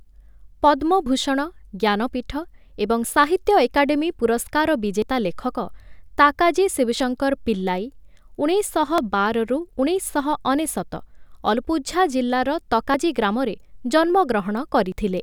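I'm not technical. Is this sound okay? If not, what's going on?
No. The speech skips briefly at 1.06, 3.04, 5.02, 7.00, 8.98, 10.96, 12.94 and 14.92 seconds, about every two seconds. Each skip loses a tiny sliver. This is likely audio missing between chunks: the recorder drops a bit when starting each new two-second piece.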